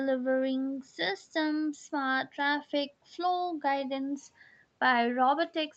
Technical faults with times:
none

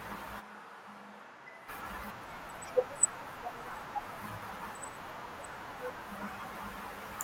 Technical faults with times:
0.42-1.67 switch to a distant microphone

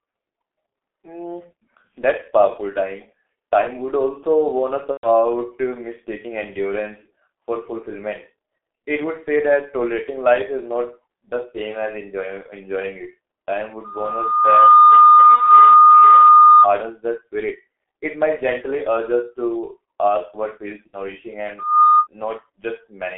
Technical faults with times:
0.00-23.17 G.723.1 codec
4.91-5.08 VoIP packet loss concealed by the speech codec
15.35-15.40 VoIP packet loss concealed by the speech codec
20.87-21.01 VoIP packet loss concealed by the speech codec

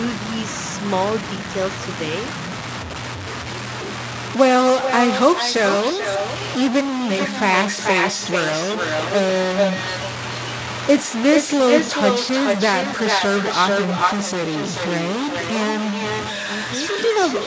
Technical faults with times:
0.00-17.47 stuck bit
2.38-3.58 echo leak
4.81-6.43 echo leak
6.70-17.47 echo leak

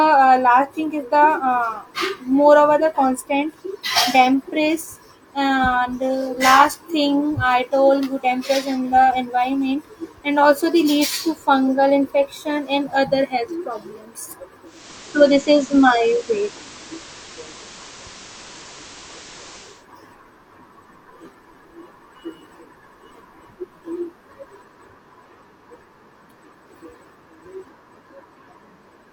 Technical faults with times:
14.64-19.86 digital radio blending to analogue

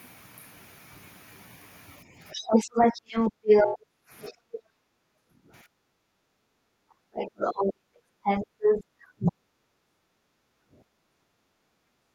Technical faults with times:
2.18-11.42 speech suppressed in double talk
2.48-4.61 other side's voice leaking through
3.32-7.87 background gated by the echo canceller
7.13-9.32 other side's voice leaking through
9.82-12.15 background gated by the echo canceller

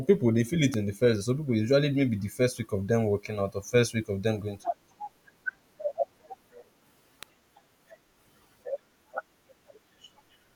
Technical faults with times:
0.74 electrical switching spike
7.23 electrical switching spike

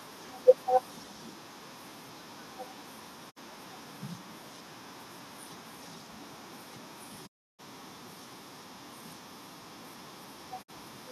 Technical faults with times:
3.29-3.38 digital broadcast dropout
7.25-7.61 digital broadcast dropout
10.61-10.70 digital broadcast dropout

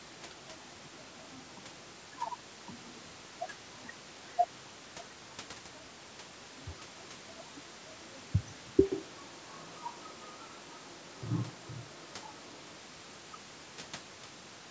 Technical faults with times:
8.92-12.78 switch to a distant microphone

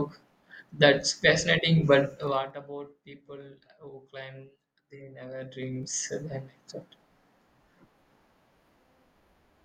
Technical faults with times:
2.18-2.56 zipper noise
5.16-6.19 zipper noise

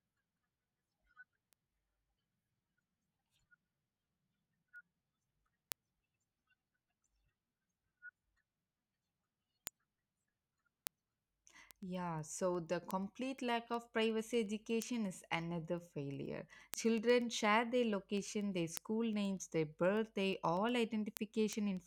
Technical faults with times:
0.21-21.77 word clock ticks

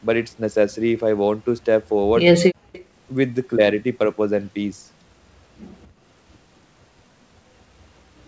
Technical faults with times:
2.53-2.71 background gated by the echo canceller
2.72-2.85 echo leak
5.82-5.87 echo leak

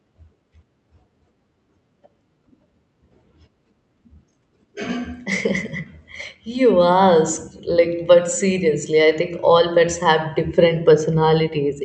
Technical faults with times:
none

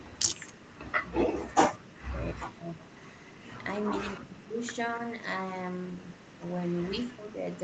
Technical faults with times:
0.00-0.19 speech suppressed in double talk
1.12-1.57 speech suppressed in double talk
2.33-2.84 speech suppressed in double talk
3.00-3.44 echo leak
4.17-4.60 speech suppressed in double talk

